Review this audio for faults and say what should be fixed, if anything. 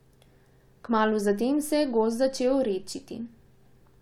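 Nothing needs fixing: the speech signal shows no audible technical faults anywhere in the recording.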